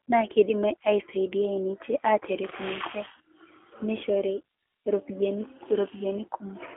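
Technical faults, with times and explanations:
Throughout, G.729 codec: the speech sits in a narrow telephone band of about 300 Hz to 3.4 kHz with nothing above 3.5 kHz, and it's rebuilt from a filter model and a few pulses per frame, so it sounds plainly rough and synthetic, which fits roughly 8 kbit/s.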